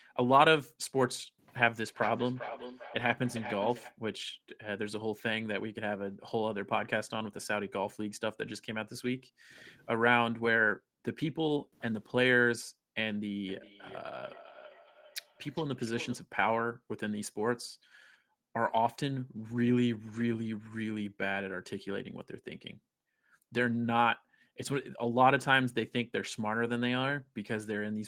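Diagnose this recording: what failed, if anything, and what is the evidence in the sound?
Feedback echo between two devices at 1.86–3.98 s and 13.48–16.24 s, a call-processing failure: the sound returns roughly every 0.4 s, about 11 dB and 20 dB below speech.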